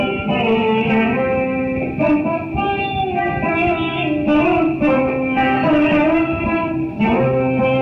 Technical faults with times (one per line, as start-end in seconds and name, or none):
none